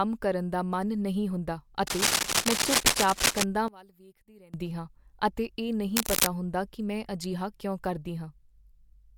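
From 1.87 to 3.44 s, just after "ਦਾ ਮਨ ਨਹੀਂ ਹੁੰਦਾ", a dense, uneven scratching and rustling rides over the speech, a little louder than the voice itself. This is cable scratch noise, likely from a worn cable or connector being moved so its contact resistance jumps about rapidly. A shorter burst of the same scratching returns from 5.96 to 6.27 s, between "ਹਾਂ ਅਤੇ ਇਹ" and "ਹੁੰਦਾ ਕੀ ਮੈਂ ਅਜਿਹਾ", again likely from a disturbed contact.

In between, from 3.68 to 4.54 s, ending just before "ਹਾਂ ਅਤੇ ਇਹ", the voice abruptly drops by about 24 dB and turns faint. The likely cause is one channel inverted: with one side's polarity reversed, the centred voice common to both channels cancels when they are summed, leaving only the small difference between them.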